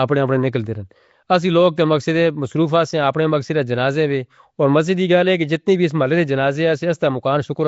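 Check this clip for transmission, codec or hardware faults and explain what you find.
One codec fault runs through the whole clip. Throughout, Nellymoser compression: the speech sounds rough, hissy and smeared, with nothing above 7.7 kHz. This is likely fixed-budget block coding that fills starved bands with noise, consistent with about 32 kbps.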